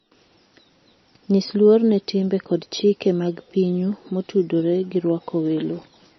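From start to finish the speech sounds dull and watery, with a swirling, bubbling texture on sustained sounds and harsh, metallic chirps on s sounds. Nothing is left above 5.9 kHz, so the top end is cut off sharply. This is likely heavy MP3 compression at a very low bitrate, around 26 kbps. Starved of bits, the encoder removes the treble and drops weak frequency lines that flicker on and off between frames.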